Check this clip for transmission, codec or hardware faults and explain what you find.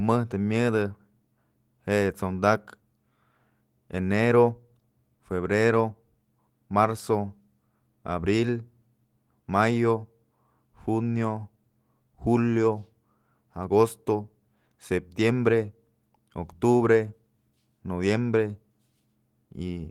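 No faults detected.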